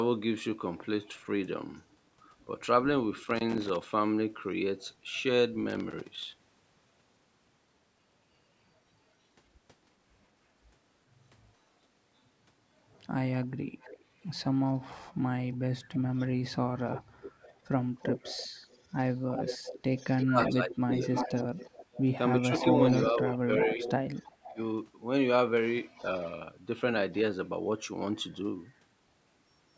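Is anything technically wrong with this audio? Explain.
Yes, three kinds of fault are audible in this speech.

Echo leak occurs at 1.04 to 1.18 s, from 13.43 to 24.52 s, and from 25.95 to 27.18 s. A delayed copy of the speech trails the original by roughly 318, 339 and 348 ms. It likely comes from a speakerphone whose echo canceller let some of its pickup through. The first and last are faint, but the long middle stretch sits only about 10 dB down. On a spectrogram it appears as a fainter, shifted duplicate of the speech harmonics.

Loose connector crackle appears from 3.24 to 3.86 s, 5.70 to 6.47 s and 12.49 to 12.80 s. A contact rapidly making and breaking chops the signal, heard as irregular scratching. The waveform shows jagged spikes and dropouts, and the spectrogram shows broadband vertical streaks that reach the 8 kHz top of the band.

Speech suppressed in double talk affects 20.25 to 21.02 s and 22.47 to 24.60 s, while the echo is also present. 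The echo canceller likely could not separate the talker from the returning echo, so it turned everything down. The speech dips by roughly 20 to 25 dB in patches, visible as sudden envelope notches and darkened gaps in the spectrogram.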